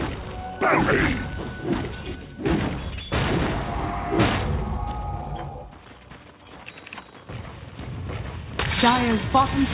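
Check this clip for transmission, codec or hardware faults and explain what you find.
Nothing wrong can be heard anywhere in this recording.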